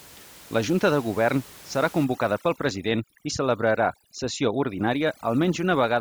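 A speech clip with room noise about 23 dB below the voice, which from 2.05 s to the end shows overdone noise removal: bands near the noise estimate are gated off, leaving twinkling specks and a spectrogram of scattered isolated time-frequency blobs over black.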